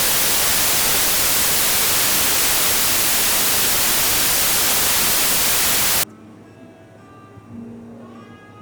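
From the start to about 6.03 s the samples are built from the wrong bytes, so the noisy low bits dominate and everything turns into loud, harsh broadband noise.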